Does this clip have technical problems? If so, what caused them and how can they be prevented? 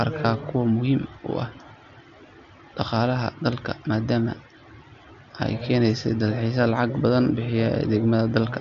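No, the speech comes through a Bluetooth mSBC headset codec working as intended, with its usual wideband limit leaving nothing above about 7.6 kHz and no technical problems to address.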